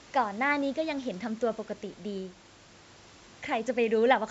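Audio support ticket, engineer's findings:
Speech signal intact, passed through the call microphone processing with its normal high-pass on the lowest bass, and room noise sitting about 29 dB below the speech.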